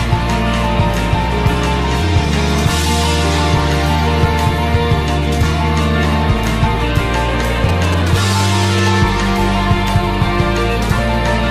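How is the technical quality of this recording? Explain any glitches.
One glitch stands out: a burst of GSM signalling interference from 7.69 to 8.89 s. A nearby 2G phone exchanging brief control bursts with its network, rather than carrying a call, induces radio energy that the audio circuitry rectifies into a galloping dit-dit-dit of short buzzes pulsing at about 217 Hz, roughly 10 dB below the wanted sound. On a spectrogram it appears as stacked harmonic lines spaced about 217 Hz apart in clustered vertical streaks. The waveform shows regular spiky pulse groups.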